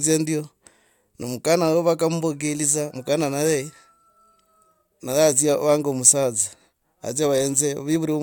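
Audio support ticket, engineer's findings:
Damaged data in compressed stream at 2.9 s: brief glitch in speech, decoder losing frame sync on corrupt bytes. Spectrogram shows a thin broadband smear; waveform a discontinuity.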